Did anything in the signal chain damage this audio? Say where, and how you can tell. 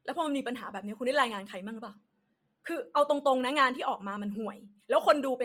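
Yes, at the codec stage. Throughout the speech the top end sounds breathy and grainy, with hiss standing in for real detail. That's likely Bluetooth LC3 compression at a low rate, around 32 kbps with 10 ms frames, zeroing the upper bands and filling them with noise.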